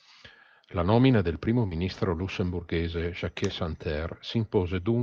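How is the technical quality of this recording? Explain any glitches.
The recording has two short glitches from short concealed packet loss. At 1.67 to 1.73 s, just after "nomina del primo", about 40 ms of audio arrived too late. At 3.47 to 3.51 s, 20 ms went missing. The receiver covered each gap by extending the preceding sound, then blended back in. Each is heard as a brief smear or wobble.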